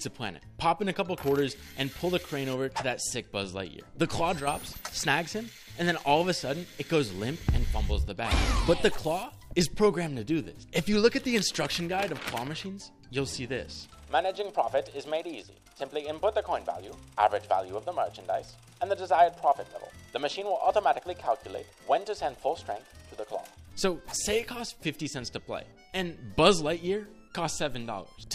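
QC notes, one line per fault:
4.40–4.47 s, one channel drops out: the level dips abruptly by about 6 dB for 72 ms, likely one stereo channel briefly lost before the mono sum.
15.42–15.66 s, one channel drops out: a sudden drop of about 6 dB for 240 ms, likely a stereo channel vanishing so only half the common signal remains.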